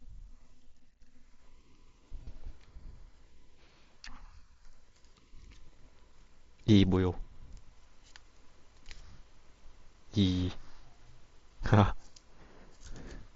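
Speech clip with concealed Bluetooth headset packet loss at 2.24–2.27 s: a brief buzzy hold, about 30 ms, as the receiver repeats recent waveform, which fits roughly four lost frames, over the light mSBC headset codec band limit.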